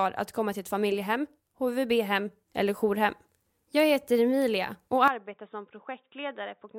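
At 5.08 s the speech abruptly turns dull and boxy and runs that way to the end. Nothing above 3.8 kHz survives, the level drops by roughly 10 dB, and a faint new background noise sits well below the speech. There is no gap at the change. The likely cause is an input switched to a poorer device, such as a headset's call profile, which passes a narrower band and brings its own tone, gain and noise floor.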